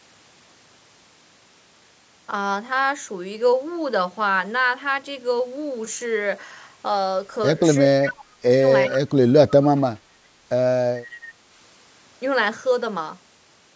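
From 7.9 to 8.54 s the speech dips by up to about 20 dB for roughly half a second, most likely speech suppressed in double talk. With both sides talking, the echo canceller seemingly mistook this voice for loudspeaker echo and turned it down. The waveform envelope caves in.

At 8.9 to 8.98 s a faint delayed copy of earlier speech appears, about 20 dB below the voice and trailing it by 405 ms. This is likely an echo leak: the far end's canceller let part of its loudspeaker pickup through. On a spectrogram it shows as a weak, smeared repeat of the earlier formant pattern.

From 8.93 to 9.53 s comes a second, deeper suppression of up to about 30 dB, again roughly half a second in total, likely from the same double-talk confusion. The voice dips further, and the waveform envelope caves in more deeply.

Two more brief echo leaks follow, at 9.77 to 9.81 s (about 35 dB down) and 11.11 to 11.17 s (about 25 dB down). 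Each one likely comes from the same residual echo, with the same 405 ms delay. They appear as short, low-level ghost bands that repeat the earlier spectral shapes, in a band that stops at 8 kHz like the rest of the call audio.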